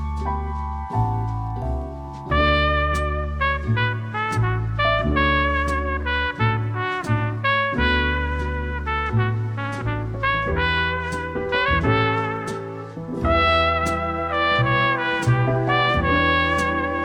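No technical faults can be heard anywhere in the audio. Nothing in the sound calls for attention from a listener checking for problems.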